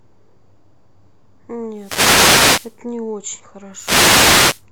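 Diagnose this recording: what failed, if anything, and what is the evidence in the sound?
Wireless microphone noise hits in the analogue radio link, at 1.71–2.82 s and 3.72–4.66 s. Receiver noise rises into bursts of static as reflections cancel the FM signal.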